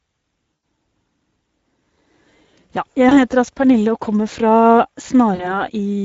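A speech recording that sounds hoarse, noisy and gritty throughout, the plainly audible damage of the Speex codec at a middle setting, which fits roughly 17 kbps. The voice briefly turns into a stretched, fading smear at 0.53–0.63 s, 3.09–3.20 s and 5.35–5.56 s, where VoIP packet loss concealed by the speech codec has the decoder stretching its last sound over missing packets.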